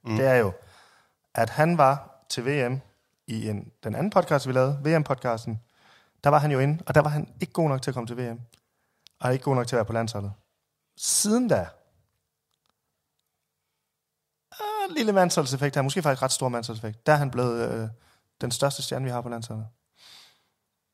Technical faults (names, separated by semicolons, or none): none